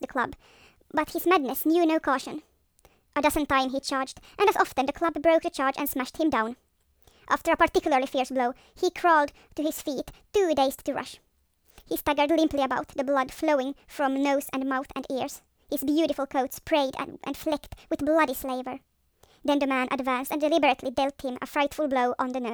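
Speech running too fast and too high for its whole length shows a wrong sample rate fault. Everything plays about 1.38 times faster and sits about 5.5 semitones higher, which fits audio recorded at 32 kHz and played back at 44.1 kHz with no conversion. Unlike a time-stretch or a pitch shift alone, speed and pitch rise together by the same ratio, and the speech has no warbling or phasey processing artefacts.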